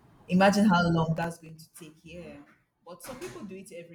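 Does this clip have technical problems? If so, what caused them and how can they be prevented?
Yes. From 1.17 to 1.58 s the speech breaks into a burst of gritty crackle, a rapid series of tiny hard-edged dropouts that tears at the sound and then stops. This is processor overload crackle: the processor fell behind and missed a string of buffer deadlines, roughly fifteen of them, each leaving a gap of silence about 1.5 ms long, which fits a very small buffer. To prevent it, use a larger audio buffer and reduce competing processing load during recording or playback.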